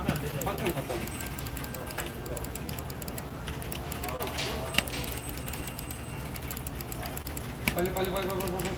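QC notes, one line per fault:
Throughout: clock drift between sender and receiver. The sender's clock runs about 2% slow, so the receiver's buffer keeps draining and small timing hiccups recur unevenly.
0.31–4.21 s: scattered short gaps. About five brief holes, none longer than about 30 ms, were filled by extending the preceding sound, leaving ticks or smears.
0.74–7.12 s: repeated timing corrections. The receiver repeatedly repeats short pieces, playing at 99% speed and adding roughly 100 ms, heard, if at all, as slight hiccups and unsteady pacing.
6.51–8.71 s: scattered short gaps. Three or so small holes, the longest about 30 ms, were patched by continuing the last sound, producing brief smears.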